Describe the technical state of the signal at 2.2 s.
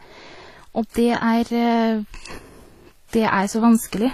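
At 2.2 s the speech is inside a sudden gain jump that runs from 2.15 to 2.38 s. The level steps up by about 6 dB from one sample to the next, and the background noise rises with the speech, likely because a gain setting was applied with no ramp. A click can mark each edge. On the waveform the envelope jumps abruptly at 2.15 s and drops back just as sharply at 2.38 s. A spectrogram shows a uniform brightening across all frequencies for that span.

The same moment also carries transcoding between lossy codecs, present through the whole clip. The sound has likely passed through one lossy encoder and then a second, lower-rate one. The result suggests something like a WMA stage followed by HE-AAC at a modest bitrate. Artefacts from the first stage are re-coded and layered under the second stage's own swirl. On a spectrogram everything above 14.8 kHz is empty, a hard ceiling that holds at 2.2 s, and the high band below it looks blotchy and patched.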